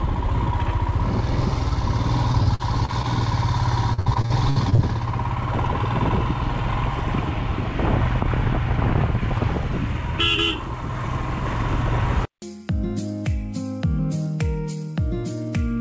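Repeated packet loss (robotic sound) chops the audio at 2.32–3.05 s and harder at 3.93–4.80 s, where gaps up to 59 ms get patched by stretching the last sound. It's carried through a call path whose hard top end at 8 kHz fits a wideband codec like G.722.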